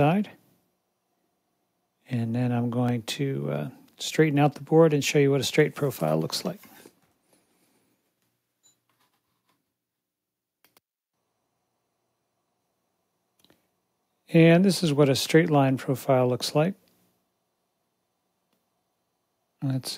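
Clock drift buffer slips run from 0.62 s to 19.86 s. A click or pop recurs at a steady interval of about 1.13 s, roughly twenty times in all. The likely cause is two devices running on separate clocks, one off by something like 300 ppm. The buffer between them slowly fills or drains until a short block, on the order of 15 samples, is dropped or repeated, and each slip leaves a brief break in the waveform.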